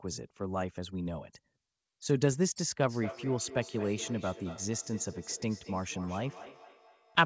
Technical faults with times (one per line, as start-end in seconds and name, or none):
2.90-7.25 feedback echo between two devices